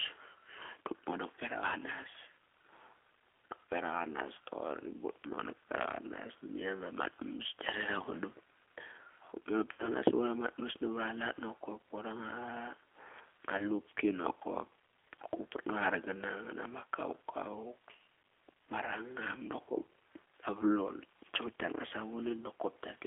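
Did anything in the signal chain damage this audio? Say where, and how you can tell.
Yes. The G.729 codec stage shaped the whole clip. The speech sits in a 300 Hz to 3.4 kHz band with a plainly audible rough, synthetic edge. This fits an 8 kbit/s codec that rebuilds each 10 ms frame from a filter, a pitch predictor and a few pulses.

VoIP packet loss, concealed by the speech codec, shows up at 9.73–9.90 s, 11.63–11.66 s, 13.58–13.65 s and 21.87–21.93 s. Each gap is filled with stretched sound that fades. That is the decoder extrapolating its last pitch and filter across roughly 60, 10, 10 and 40 ms of missing frames.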